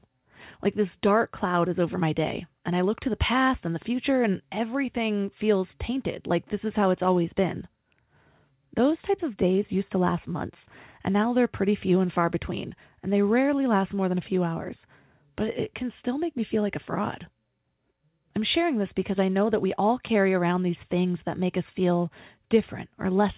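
No technical faults can be heard in this speech clip, which comes through a call path whose band ends at 4 kHz, as expected from a narrowband telephone codec.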